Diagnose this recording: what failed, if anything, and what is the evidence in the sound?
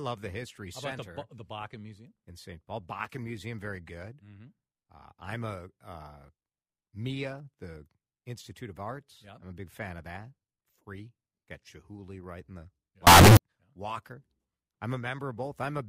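The sample-format conversion stage likely failed, with 32-bit float audio read as 32-bit integer for a short stretch. From 13.07 to 13.37 s the speech jumps to a very loud, harsh, near-square waveform sitting at an almost fixed, high level, with background noise as loud as the speech, though the pitch can still be followed. Reading float data as integers lets the sign and exponent bits dominate each value, so level no longer tracks the original.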